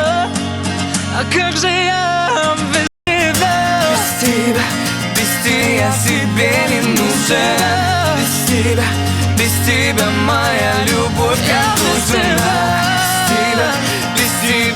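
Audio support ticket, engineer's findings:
0.00 to 3.07 s: sound dull, top end gone, nothing above 11.4 kHz. Faint extra hiss, far below the signal. Input switched to a poorer device, likely a second mic or headset call profile. Narrower band, different tone. About 200 ms silence at 3.07 s as input changes over. Full bandwidth returns after. Loudness steady across the switch.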